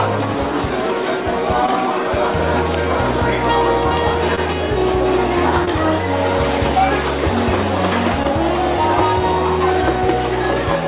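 The audio has four brief dropouts, heard as short concealed packet loss at 1.66–1.69, 4.35–4.39, 5.65–5.69 and 8.23–8.26 s. Each gap is about 20 ms. The receiver bridges it by extending the preceding sound, then blends back, leaving a quick smear or wobble. The whole clip stops at 4 kHz, which points to a narrowband call codec such as G.711.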